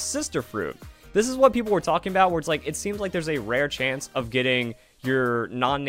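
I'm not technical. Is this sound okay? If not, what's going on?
Yes, nothing in this recording points to a technical problem with how the sound was captured or played back.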